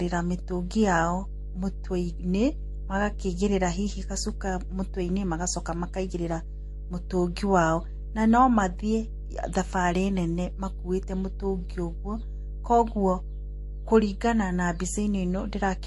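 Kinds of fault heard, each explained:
Mains hum: A steady low tone at 50 Hz runs under the speech for the whole clip. It is strong, roughly 10 dB below the speech. Power-line current is leaking into the signal, through a ground loop or a nearby transformer, with some low harmonics.
Transcoding between lossy codecs: The speech carries different codec artefacts heard together throughout, with nothing above 11.3 kHz. The mixed artefacts likely come from two low-rate lossy encodes in a row, which fits a Vorbis stage near 46 kbit/s followed by MP3 near 48 kbit/s.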